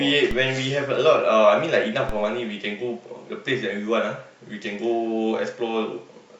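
A speech clip with a DC step at 0.31 s and again at 2.09 s. Each time the waveform's zero line jumps by about -17 dBFS and then drifts back as a 5 Hz high-pass bleeds it off, so you get a low thump while the talking carries on untouched.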